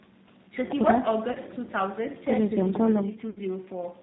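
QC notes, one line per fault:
Throughout: G.729 codec. At 8 kbit/s the speech is rebuilt from a filter, pitch and pulses, so it sounds rough and synthetic. A spectrogram shows nothing above 4 kHz.
1.32–1.38 s and 3.30–3.40 s: VoIP packet loss concealed by the speech codec. The decoder stretches the last sound into a fading buzzy tone or coloured noise, spanning about 30 ms and then 60 ms, which fits one and then two lost packets. The waveform shows decaying level.
2.75–3.17 s: CD stuck on one turn. A 209 ms slice repeats twice with short mutes at each jump. The waveform shows identical blocks separated by brief flat gaps.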